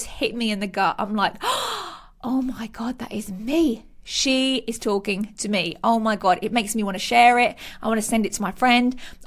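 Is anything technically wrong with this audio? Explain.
No, nothing is technically wrong with this audio.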